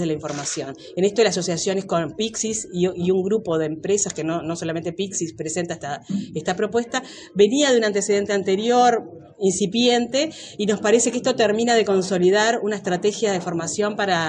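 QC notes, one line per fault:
No faults heard anywhere in this recording.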